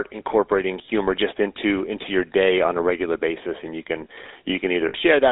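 The whole clip carries the roughness of the GSM full-rate codec: the speech has a buzzy, gravelly edge, and the band runs from about 300 Hz to 3.7 kHz, which points to the 13 kbps full-rate coder. A spectrogram shows a hard ceiling near 3.7 kHz and almost nothing below 300 Hz.

From 0.86 to 0.89 s, just before "just into into your", lost GSM frames hold the preceding sound as a short metallic ring, a gap of about one 20 ms frame. On the waveform, the previous shape repeats. The spectrogram shows a brief frozen, smeared band.

From 4.88 to 4.96 s, a longer run of lost GSM frames, about 60 ms or roughly three frames, stretches the same rough ring further. The waveform repeats the held shape, and the spectrogram shows the last spectrum frozen.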